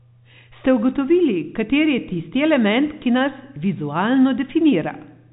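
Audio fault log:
No faults heard.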